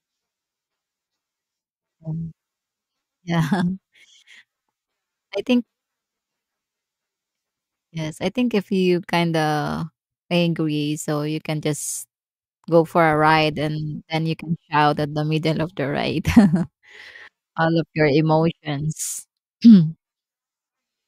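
No technical faults are audible.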